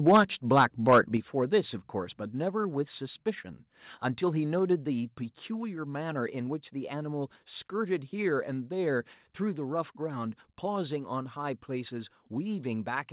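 From 0.07 to 0.22 s and again from 0.57 to 0.99 s the loudest syllables break into a harsh crackle. This is microphone overload, likely from an input set so high that peaks ran about 6 dB and then about 5 dB past the converter's ceiling, flattening a small share of samples. Unlike a level drop, it distorts only the peaks.

The microphone volume stepped down at 0.17, 1.17, 2.19 and 4.59 s, by about 3, 6, 2 and 2 dB, likely the call software cutting the input gain. Voice and background fall together in one clean jump and stay down, with no gradual fade or pumping as a compressor would give. All of it reaches the listener through a G.711 mu-law call path with nothing above 4 kHz.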